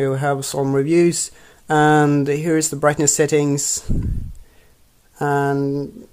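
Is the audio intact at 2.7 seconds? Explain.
Yes, the audio is intact at 2.7 seconds, with no dropout, click, distortion or other fault at that point.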